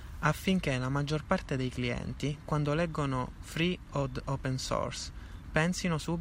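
Nothing stood out on listening to the speech here.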